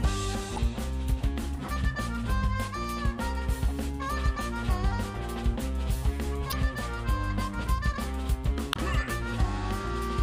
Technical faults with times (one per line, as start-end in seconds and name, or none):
0.54-0.58 damaged data in a compressed stream
6.49-6.53 damaged data in a compressed stream
8.70-8.77 damaged data in a compressed stream